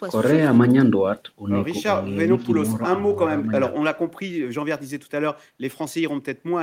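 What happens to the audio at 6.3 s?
Nothing goes wrong at 6.3 s; the speech continues intact through that moment.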